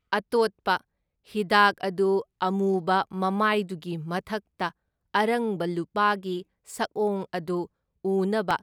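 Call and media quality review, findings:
Regular clicks in speech, 1.26 to 8.51 s, every 1.81 s, roughly five. Clock drift buffer slips, likely between two unsynced devices. Clocks differ by several hundred ppm. Buffer drifts, then drops or repeats a block, some 70 samples.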